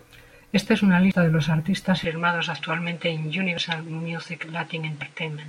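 At 1.12 s, between "es una" and "de los artistas", the speech jumps ahead with no gap. About a tenth of a second is gone. This is a dropped buffer (overrun), likely from samples being overwritten before the program collected them.

From 2.04 s, just after "de los artistas", the sound turns duller and about 5 dB quieter, and a new noise floor sits about 35 dB below the speech. The input was likely switched to a poorer device, with no silence at the change.

The same skip recurs at 3.58 s, losing about a tenth of a second, and at 5.02 s, losing about half that.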